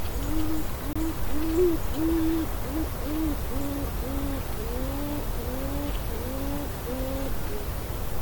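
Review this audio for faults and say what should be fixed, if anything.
At 0.93 to 0.96 s the sound cuts to about 25 ms of silence, then resumes. The likely cause is a Bluetooth stall: interference delayed packets, the headphones' buffer emptied, and playback paused until the resent data arrived. Unlike a codec dropout, there is no smeared or repeated fragment covering the gap, just a clean silence. Reducing radio interference and keeping the phone closer would prevent it.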